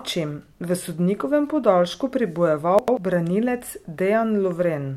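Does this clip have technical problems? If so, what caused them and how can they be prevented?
Yes. Chunks out of order from 2.79 to 2.97 s: one 93 ms chunk plays a chunk late, jumbling speech with three hard joins, unlike a dropout, nothing missing. Prevent it with sequence numbers and a reorder buffer.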